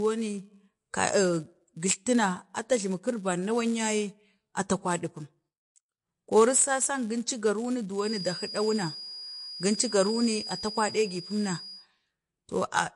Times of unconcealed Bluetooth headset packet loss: none

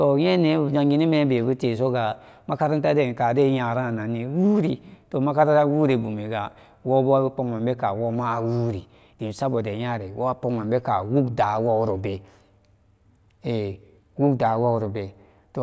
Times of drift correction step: none

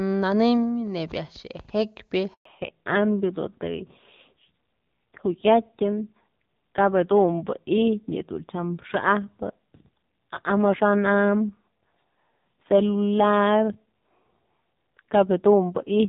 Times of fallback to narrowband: 2.45-16.08

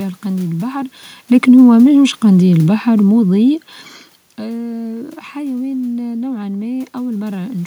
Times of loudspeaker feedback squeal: none

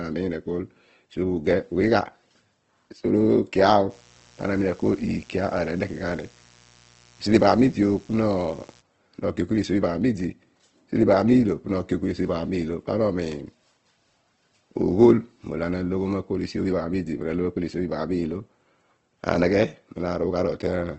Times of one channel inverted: none

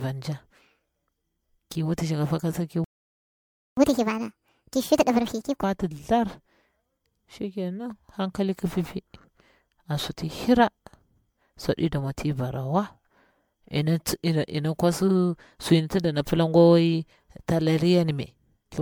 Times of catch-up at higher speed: 3.77-5.63

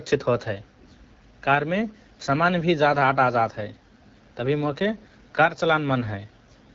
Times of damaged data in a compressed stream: none

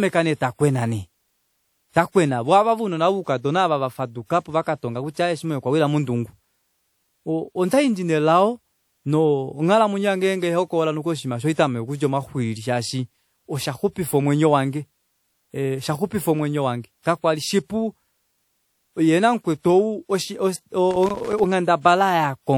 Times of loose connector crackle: 20.91-21.44

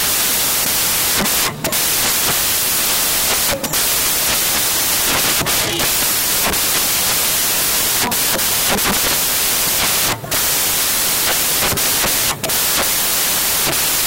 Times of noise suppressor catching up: none

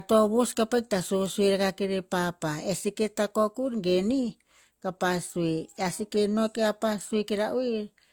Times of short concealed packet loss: none

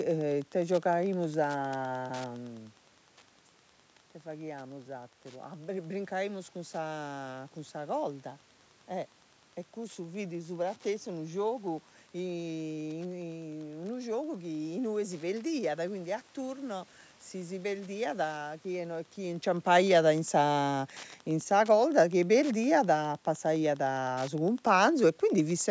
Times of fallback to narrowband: none

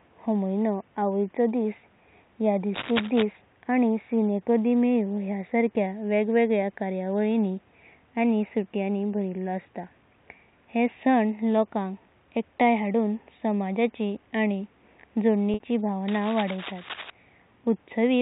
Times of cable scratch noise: 2.74-3.23, 16.08-17.10

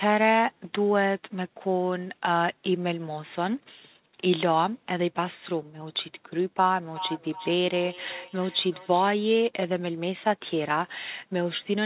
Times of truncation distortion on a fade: none

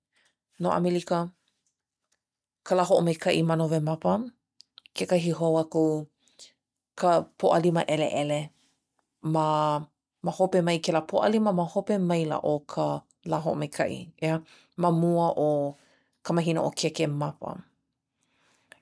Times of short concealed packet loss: none

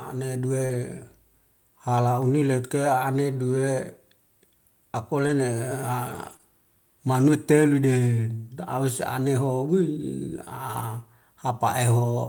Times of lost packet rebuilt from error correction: 0.69-0.75, 10.75-10.81

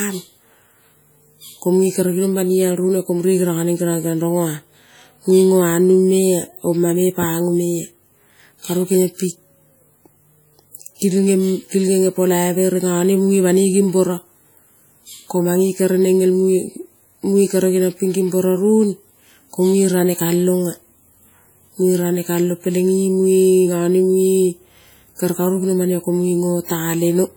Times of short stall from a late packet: none

